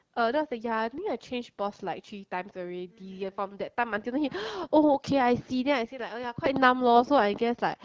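A speech clip carried over the AMR wideband (HD Voice) codec at 12.65 kbit/s suffers AMR bit errors from 5.35 to 5.50 s. Flipped, weakly protected bits misplace the excitation pulses and skew the pitch, gain and spectral values, so that stretch turns hoarse and gargly while keeping its rough level. The length fits about eight 20 ms frames. On a spectrogram the harmonics there smear into ragged, noisy texture.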